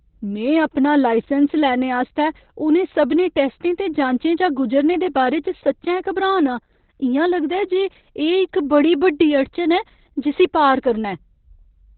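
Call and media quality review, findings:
Opus voice compression, whole clip: muffled, hoarse, slightly robotic speech. SILK linear-prediction coding with coarse excitation, consistent with roughly 8 kbps narrowband. Spectrogram shows a hard ceiling at 4.3 kHz and smeared harmonics.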